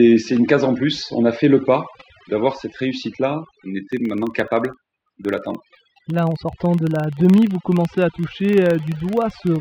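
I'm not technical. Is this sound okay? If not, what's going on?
No. Overdone noise removal runs through the whole recording. A cleanup tool meant to strip out background hiss was set far too strong. Wherever part of the sound resembled its idea of noise, it turned that slice of pitch almost off, and the softer parts of the speech were removed along with it. That's why the background drops and breaks up into twinkling, warbling specks.

From about 3.93 s to the end at 9.61 s there's a second fault: a filter restarted on every block. The audio is processed in short chunks, and a filter here forgets where it left off, starting each chunk fresh from silence. Every restart leaves a tiny click. The clicks arrive about 23.4 times per second, which fits blocks of 2048 samples, so they merge into a low buzz that grows louder as the speech gets louder.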